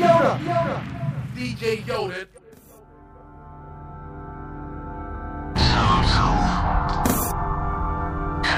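Right from the start there's a channel delay doubling running the whole way through. One channel sits about 40 ms behind the other, and once the two get folded down to mono, that late copy doesn't blend in. You hear it as its own slap, an even-level echo trailing every sound, so everything feels doubled. It's a long-buffer offset between the channels, not a room reflection.

On top of that, there's damaged data in a compressed stream at three spots: 2.34 to 2.38 s, 5.11 to 5.15 s, and 8.43 to 8.45 s. Each one is a short glitch where the audio breaks up. What's happening is that the decoder hits frames it can't read properly, loses sync, and jumps ahead to the next frame header it can find, which is what disrupts the audio there.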